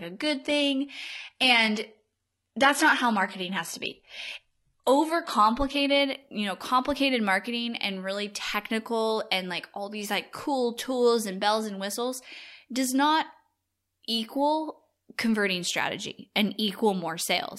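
An adaptive stream starting at a low bitrate: the player opened this speech on a very low-bitrate version, consistent with roughly 16 kbit/s HE-AAC, until 6.0 s, so treble sounds synthetic and artefacts are stronger, then it jumps cleanly to fuller quality just before "you know complicated marketing".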